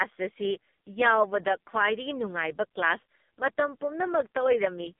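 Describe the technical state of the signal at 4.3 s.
At 4.3 s the AMR narrowband mobile codec applies throughout. Its buzzy, synthetic speech fits roughly the 4.75 kbps mode, and a spectrogram shows nothing above 3.6 kHz or below 200 Hz.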